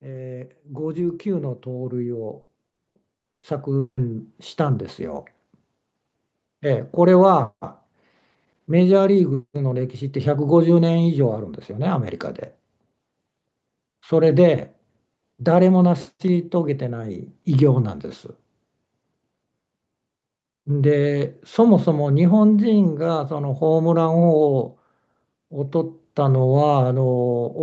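From 0.05 to 5.29 s there's automatic gain rising: the gain control thinks the input is too quiet and ramps up about 16 dB, so speech and background swell together. Inside that, from 2.41 to 4.00 s, repeated packet loss gives a choppy, robotic stretch, with about half a dozen holes (the longest 180 ms) patched by stretching the last sound, roughly a third of that span.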